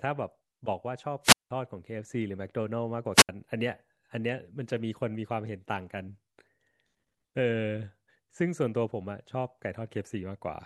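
Weak radio signal let the receiver's squelch mute the microphone, a wireless microphone squelch dropout: a brief hiss, then silent holes at 1.23–1.51 s (183 ms) and 3.13–3.29 s (70 ms).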